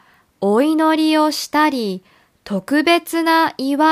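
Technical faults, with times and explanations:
Nothing to flag on this one, since no technical faults turn up anywhere in the speech.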